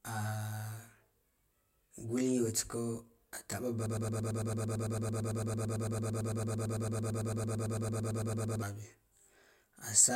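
Right from the start the whole clip has a channel delay problem, heard as comb filtering. One side seems to lag the other by roughly 20 ms, and once the two are folded to mono the shared content cancels at a regular series of frequencies, starting down around 30 Hz and repeating up the spectrum. The speech comes out rough and slightly doubled the whole way through.

Then at 3.86 s it gets stuck in a broken-record loop that runs until 8.62 s. A tiny slice, about 0.11 s long, repeats back to back over forty times, so you get a rapid stutter instead of anything intelligible. The likely cause is a stall in the player or stream, which kept resending the last fragment it was holding. Whatever speech should have filled those nearly five seconds is simply gone.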